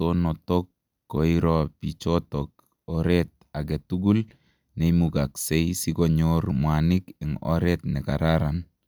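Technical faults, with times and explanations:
No technical faults can be heard in this speech clip.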